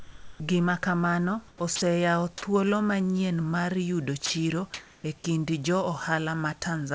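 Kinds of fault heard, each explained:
Sound dropped by the voice detector: The sender's voice detector likely judged real speech to be background and stopped transmitting, so the receiver played synthetic noise instead. The speech gives way to a flat, featureless hiss and returns when the detector triggers again. It happens from the very start to 0.40 s, losing about 0.32 s of speech, then briefly at 1.76–1.82 s and 4.26–4.30 s, each short gap swallowing speech entirely.
Comfort noise in place of the background: During pauses the sender likely switched to discontinuous transmission. The receiver filled them with generated noise shaped only roughly like the real room sound, which sits about 29 dB below the loud speech. At 1.48–1.60 s the textured background turns into smooth, steady noise about 7 dB quieter. At 4.74–5.04 s the substitute is about 8 dB louder than the true background, so the pause audibly swells.
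Onset clipped by the voice detector: The detector was likely slow to notice speech resuming, so the first fraction of each utterance was never sent and comfort noise covered it. The speech then starts abruptly, missing its soft attack. This happens twice, at 1.58–1.60 s at the end of the first noise patch and at 5.22–5.24 s, each time cutting about 20 ms from the beginning.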